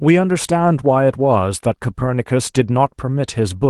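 Nothing in this bit of speech goes wrong; it just carries the ordinary character of a call line, with the top end rolling off around 12 kHz as you'd expect from an Opus-coded WebRTC connection.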